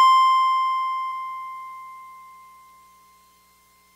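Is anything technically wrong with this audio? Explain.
Yes, there's one glitch in this music. At about 1.11 s you get compressed frames skipped: a few whole codec frames never get decoded, so the music jumps ahead by roughly 70 ms.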